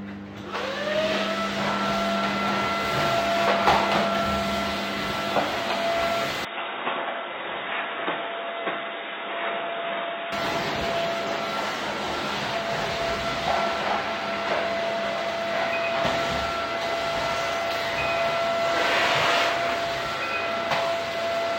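From 6.45 to 10.32 s the sound turns dull and slightly quieter, with nothing above 3.8 kHz, likely an input switched to a poorer device, then recovers.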